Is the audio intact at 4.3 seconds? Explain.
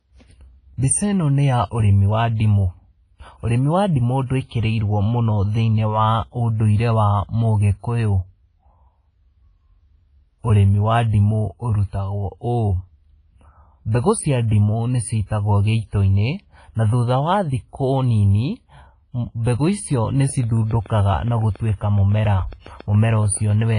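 No. From 4.26 s to 4.30 s there is pre-echo: a burst of hiss about 39 ms long arrives just before a sharp attack in the speech, and the attack sounds softened and smeared. In a transform codec the quantisation noise is spread across the whole block. Here the attack falls late in a block, so the noise needed for the loud onset also fills the quiet lead-in that should be clean.

That smearing sits inside heavy coding damage that runs through the entire clip and is likely WMA compression. Nothing is present above 10.1 kHz, which points to a low bitrate around 24 kbps where weak spectral lines are dropped. Long transform blocks spread the noise over tens of milliseconds, so the speech has a washy, ringing quality with hiss that rises and falls with the signal.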